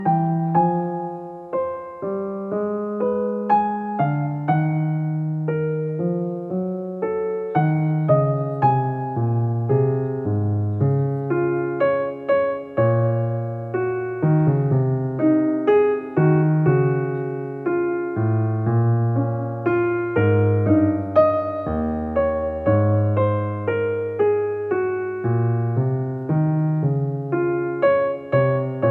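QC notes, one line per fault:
No faults heard on this clip; nothing to log.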